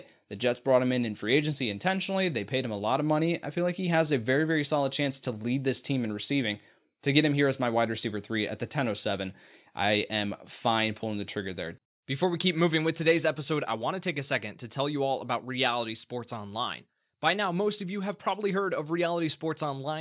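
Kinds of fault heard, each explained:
No kinds of fault are heard in this speech.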